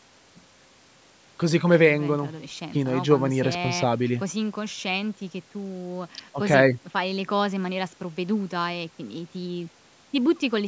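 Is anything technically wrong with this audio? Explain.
No, nothing is technically wrong with this speech recording. It has passed through a call's microphone processing, so the lowest bass is trimmed away and nothing reaches above 8 kHz, which is normal for that path.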